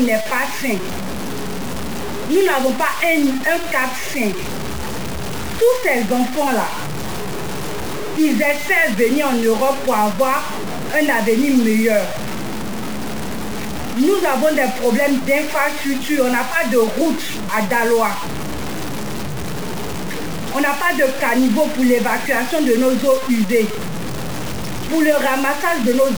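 From start to finish there's a coarse, stepped distortion that tracks the audio itself, with the error sitting only about 10 dB under the signal. That's likely low bit depth without dither, with the sound pointing to something like 4 bits, truncated rather than smoothly rounded.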